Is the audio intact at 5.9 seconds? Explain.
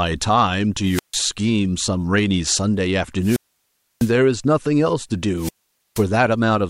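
No. A wireless microphone squelch dropout runs from 5.36 to 6.06 s. The radio signal fades, hiss rises, then the receiver mutes the speech for about 0.48 s.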